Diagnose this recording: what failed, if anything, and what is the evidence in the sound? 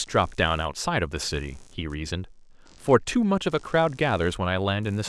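The analogue wiring failed: computer activity noise is riding the shared ground, as processor or mouse load shifts leak into the audio path. Throughout the speech, a buzzing chirp pulses around 70 times a second, roughly 30 dB below the voice, tracking computer activity rather than the speech.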